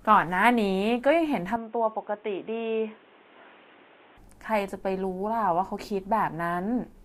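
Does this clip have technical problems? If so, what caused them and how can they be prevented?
Yes. From 1.56 to 4.18 s the speech turns dull and boxy, with nothing above 3.8 kHz, a level drop of about 5 dB and a new noise floor roughly 30 dB down. This is likely an input switched to a poorer device, such as a headset call profile. Locking the recording input to one fixed microphone prevents it.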